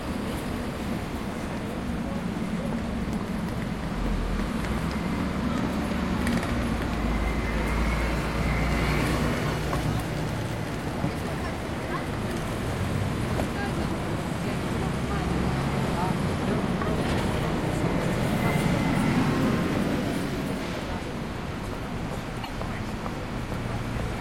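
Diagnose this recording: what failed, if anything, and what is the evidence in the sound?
Damaged data in a compressed stream, from 22.41 to 22.49 s, at the codec and storage stage. For about 90 ms near the end, the sound is briefly disrupted in a way that has nothing to do with the material around it. The bytes for those frames were corrupted in the file or stream, so the decoder built garbage from them, lost frame sync, and had to find the next valid header before normal decoding could resume.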